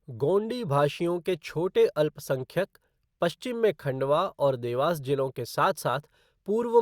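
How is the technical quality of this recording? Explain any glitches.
The recording's technical quality is sound, with no glitches or signal faults to explain anywhere in the audio.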